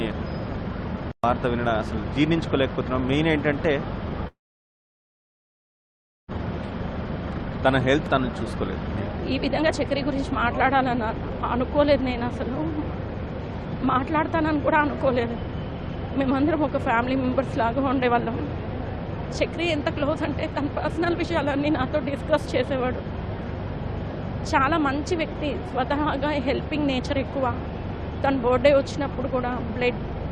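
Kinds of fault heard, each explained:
call audio freeze: at 4.27 s the sound stalls for 2 s, nearly all silent, then resumes intact. Likely delayed packets emptying the jitter buffer.
jitter buffer speed-up: the receiver snips tiny pitch-period slices to shed backlog, so three stretches from 9.3 s on run 2 to 3% fast at the same pitch.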